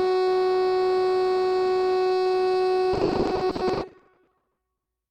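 From 2.93 s to 4.87 s the music breaks up with repeated packet loss, giving a robotic sound. Audio data keeps going missing in quick succession. Each hole is filled by stretching the sound that came just before it. Then the next hole arrives. The gaps are short, the longest about 80 ms. Together they make up about 41 percent of this stretch. The music turns choppy, with pieces of it gone.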